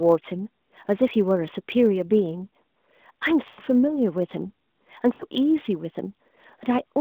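From start to finish, a steady 100 Hz buzz sits under the speech. This is a block size mismatch (truncated): one stage writes longer blocks than the next reads, and the tail of each block is cut off every 10 ms. The pace stays at normal speed, which points to a very small size difference. Unlike mains hum, the buzz comes from the block-rate cuts rather than a pure tone.

At 3.48 to 3.60 s come lost AMR speech frames. About 100 ms of speech, which fits five 20 ms frames, failed decoding. The decoder repeats the last good pitch and vocal tract settings at falling gain, so the sound stretches and fades instead of cutting off as a clean dropout would.

A shorter loss at 5.13 to 5.24 s, about 60 ms or three frames, gives a brief smeared dip before the voice returns weakly. The mobile narrowband channel, limited to about 200 Hz to 3.6 kHz, carries all of this.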